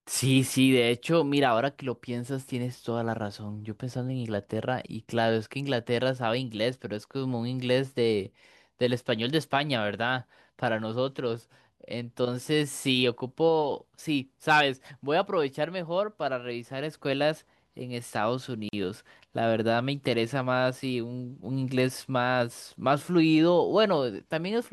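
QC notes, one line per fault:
18.69–18.73 s, gap at a join of encoded pieces: speech drops to silence for 43 ms and resumes where it stopped, from encoder delay and padding left in at the join.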